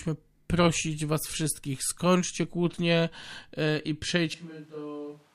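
At 4.34 s the speech suddenly turns roomy and hollow, thins in the bass and falls roughly 10 dB, with room noise now around 25 dB below it, through to the end. The likely cause is a switch to a distant microphone.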